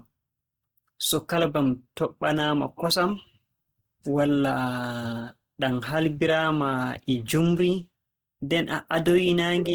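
Speech sounds grainy and rough throughout, though it reaches 20.2 kHz. Likely cause: Opus compression in music mode, fitting 16 kbps, noise-filling starved bands.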